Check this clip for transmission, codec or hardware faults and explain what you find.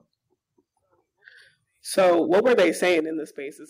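The clip has two faults, both in the microphone's input chain.

From 1.97 to 3.0 s there is microphone overload. The input level was likely set too high, so speech peaks hit about 10 dB past the converter's limit. With roughly a sixth of samples flattened, the loudest syllables sound harsh and crackly.

The microphone volume stepped down twice. At 1.99 s, just after the overload begins, the input gain was likely cut automatically by about 2 dB. At 3.0 s it dropped again by about 9 dB. Each step makes the speech and background suddenly quieter, and the second drop comes as the distortion ends.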